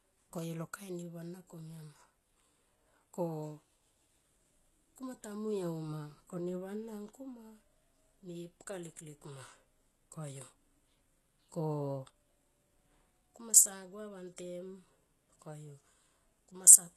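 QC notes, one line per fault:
Throughout: heavy HE-AAC compression artefacts. The treble sounds bright but synthetic, and s sounds come out gritty and lispy because the upper band is rebuilt from copied lower bands rather than coded. The likely cause is HE-AAC v2 at a very low bitrate, roughly 16 kbps. A spectrogram shows a hard ceiling at 12.4 kHz, with the upper region repeating lower-band patterns under a blocky, coarse envelope and misaligned harmonics at the crossover.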